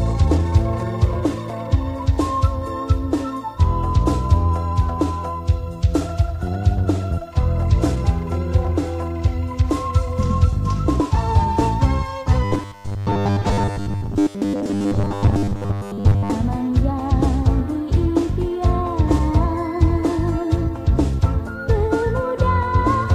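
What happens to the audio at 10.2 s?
Nothing goes wrong at 10.2 s; the audio plays through that moment intact, with no audible fault.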